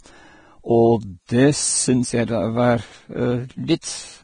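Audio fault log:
throughout, Vorbis compression: hissy, grainy treble, roughened tones and nothing above 9.7 kHz, likely from heavy Vorbis coding near 23 kbps quantising the upper band coarsely.
3.81–3.83 s, pre-echo: a 20 ms hiss leads into a sharp attack, softening it, because quantisation noise sized for the loud onset fills the quiet moment before it.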